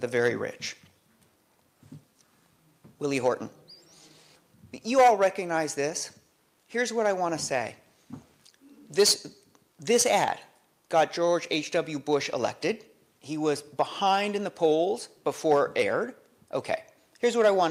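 No technical faults can be heard anywhere in this recording.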